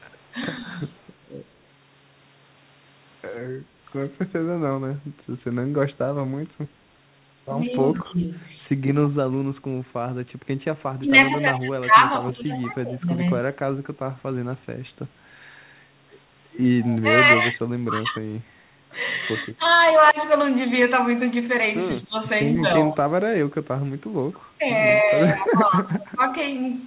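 From 0.61 to 0.84 s the speech dips by about 5 dB, over roughly a tenth of a second. This is speech suppressed in double talk, likely because the echo canceller turned both talkers down. A faint echo leak follows at 0.88 to 1.0 s, about 40 dB below the speech. It is a copy delayed by 147 ms, likely loudspeaker sound the canceller missed. At 3.65 to 3.78 s the background is gated by the echo canceller and drops by about 7 dB, then returns. Further echo leaks come at 7.67 to 8.0 s, about 30 dB down, and at 16.81 to 16.99 s and 22.56 to 24.38 s, about 20 dB down. Double-talk suppression returns from 7.75 to 13.46 s and from 17.0 to 26.26 s, cutting speech by up to about 20 dB in pieces. It takes roughly two and then three seconds in total. All of it sits within the call's 4 kHz band.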